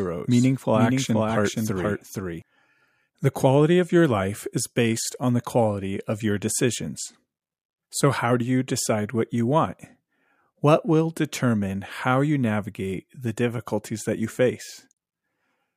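From the very start until 2.42 s, the speech is heard twice, a second full-band copy trailing about half a second behind and a few decibels quieter, with no reverb tail, then cutting off abruptly. This doubled audio track likely comes from a second, slower capture path mixed in.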